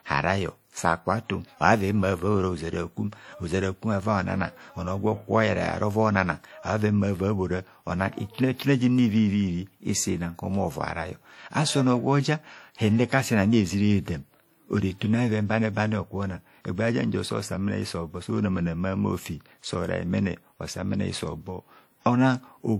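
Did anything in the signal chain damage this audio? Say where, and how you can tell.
Yes, at the codec: the speech rings and smears throughout, with hiss breathing along, likely WMA compression; content still reaches 20.1 kHz, so not band-limiting.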